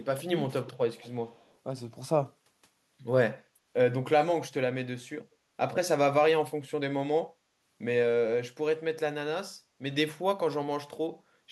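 Three brief echo leaks occur early: at 0.00–0.05 s, a barely audible trace about 180 ms behind the speech; at 0.99–1.11 s, the clearest, roughly 25 dB down and lagging by about 190 ms; and at 1.33–1.57 s, fainter again at the same lag. Each is a delayed, detached copy of the speech, likely leaking past a far-end echo canceller. Unlike room reverberation, it repeats at a fixed gap rather than smearing into a decaying tail.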